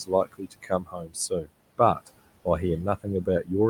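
Noise suppressor artifacts run through the whole of this speech recording. The suppressor estimates the steady background and pulls down each frequency band it judges to be noise, frame by frame, cutting that noise by about 21 dB. The room noise, which sits about 16 dB below the speech, therefore drops away in the pauses and comes back up beneath the voice. Speech cut by the noise suppressor occurs from 0.05 to 1.51 s. Across roughly a second of that span, the suppressor treated parts of the speech itself as background and turned them down with the noise, by as much as about 21 dB. Softer consonants and quieter stretches in that opening section sound swallowed and faint instead of cleanly carried.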